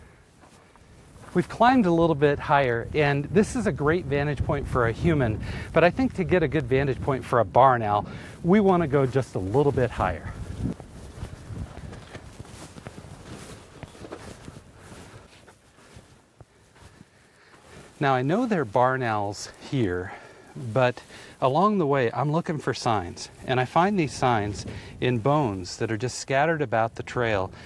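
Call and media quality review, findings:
Nothing stood out on listening to this audio.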